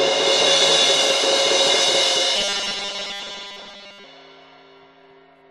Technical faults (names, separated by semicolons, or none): doubled audio track; robotic sound from repeated short buffers